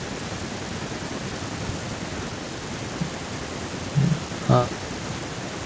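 A speech clip with no technical faults to report.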